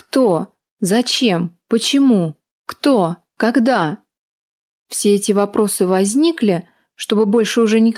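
No technical faults can be heard anywhere in the audio; the signal holds steady and intact throughout.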